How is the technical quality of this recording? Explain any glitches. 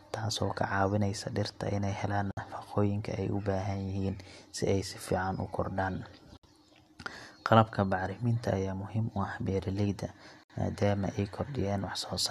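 The recording has a recurring glitch: short dropouts in the speech at a steady 4.0 s interval. These are gaps at the joins of encoded pieces, at 2.31–2.37 s, 6.37–6.43 s and 10.43–10.50 s, each about 60 to 64 ms long. The speech was evidently encoded in separate chunks and spliced without trimming each run's startup delay and final-frame padding, so silence is left in. The speech cuts out, its edges smeared by the codec, then resumes where it stopped.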